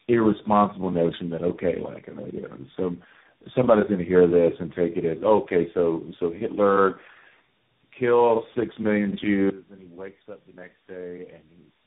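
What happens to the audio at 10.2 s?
At 10.2 s the speech has collapsed to a faint residue, about 20 dB quieter than before. The drop begins at 9.50 s and lasts to the end of the clip at 11.86 s. The likely cause is one channel inverted. With one stereo channel's polarity flipped, everything common to both sides cancels when they are summed to mono. The centred speech mostly disappears, and only the small difference between the channels is left.

Under that, and throughout the clip, the speech sounds rough, muffled and warbly, with nothing above 3.8 kHz. This is tandem speech coding. The signal passed through three speech codecs in a row: AMR-NB at 5.9 kbit/s, then AMR-NB at 7.95 kbit/s, then CVSD at 64 kbit/s, with G.711 A-law links between them. Each stage was decoded and coded again, so every coder worked on the already damaged output of the one before, and the errors stacked.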